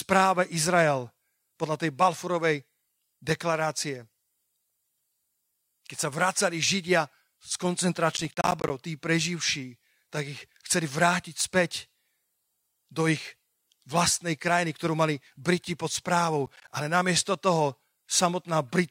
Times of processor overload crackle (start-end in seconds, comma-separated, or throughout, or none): 8.17-8.70, 16.46-16.68